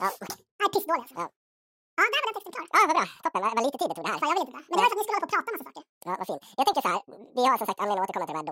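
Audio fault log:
Throughout: audio read two samples at a time (double speed). Successive sample pairs are taken as single frames, so the speech plays at 2x speed and 12 semitones (one octave) high.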